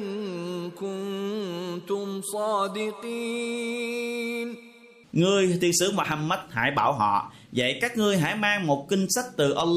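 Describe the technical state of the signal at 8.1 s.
At 8.1 s the signal is intact, with no audible fault at that point.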